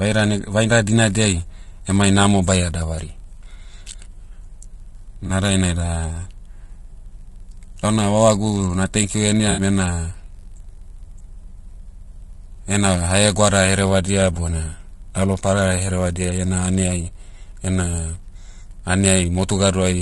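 Throughout the speech, a steady 46.9 Hz buzz reveals a padded block size mismatch: each block carries a zero-filled gap, which fits a 1024-sample read, slowing playback to 0.999 times. Rough, grainy voicing with noise between harmonics is likely low-delay AAC compression at a low bitrate. Hard clipping flattens peaks from 0.73 to 1.29 s (about 2 dB over), 12.76 to 13.79 s (about 5 dB) and 19.06 to 19.19 s (about 4 dB), adding crackle on peaks. AAC frame loss with concealment leaves smeared, noisy patches at 5.27 to 5.30 s, 9.51 to 9.61 s (60 ms) and 18.23 to 18.26 s.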